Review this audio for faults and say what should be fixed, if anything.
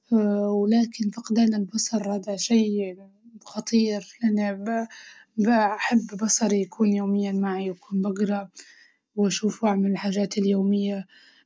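Nothing stood out on listening to this speech recording, so there is nothing here that needs fixing.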